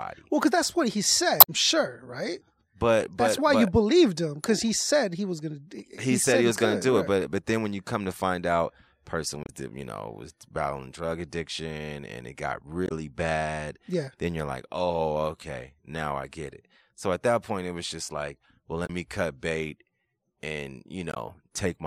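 Short chirps and squawks break into the speech at 1.37 to 1.50 s, 9.42 to 9.49 s, 12.86 to 12.92 s, 18.86 to 18.90 s and 21.12 to 21.17 s, each lasting roughly 40 to 120 ms. This is damaged data in the compressed stream: corrupted bytes make the decoder misread those frames and lose sync, so it emits garbage until it locks onto the next valid frame header.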